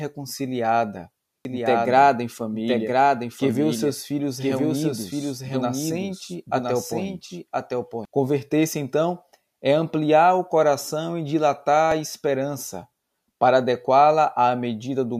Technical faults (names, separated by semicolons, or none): doubled audio track